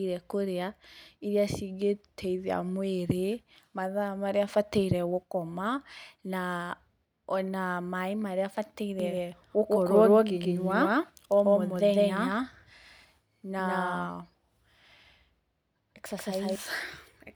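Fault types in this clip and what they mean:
Doubled audio track: from 9.0 to 16.6 s the speech repeats about 150 ms later at roughly equal level, likely a second capture path; spectrogram shows every feature duplicated, starting and stopping abruptly.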